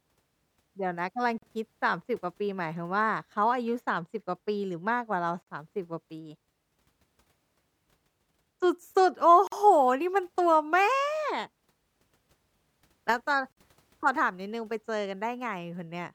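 Speech pieces were encoded separately and joined untrimmed, so each join leaves a gap of 43 to 49 ms every 4 s, at 1.38, 5.42, 9.47 and 13.52 s.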